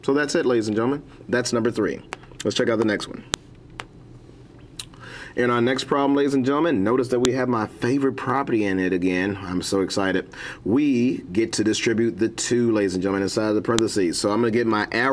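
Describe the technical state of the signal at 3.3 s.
At 3.34 s there is a sharp, loud click: a file header played as audio. Where one piece of the stream begins, its header bytes were left in place and are reproduced as sample values, giving a snap unrelated to the surrounding sound. On the waveform it shows as a spike or tiny cluster of extreme values lasting about a millisecond; on a spectrogram, a thin vertical line spanning the full frequency range.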